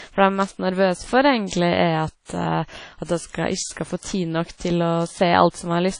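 From start to finish the speech sounds dull and swirly, with nothing at all above about 10.1 kHz. That hard ceiling and the smeared, watery texture are what a low-bitrate encode leaves behind, somewhere around 32 kbit/s. This is likely low-bitrate audio saved at a high bitrate: the current MP3 sits up at a generous rate, but re-encoding can't bring back the top end or clean up damage the first pass already did.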